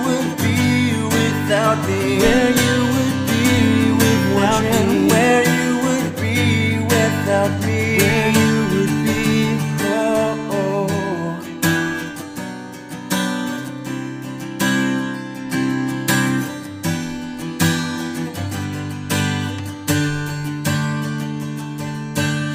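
No technical faults can be heard anywhere in the audio.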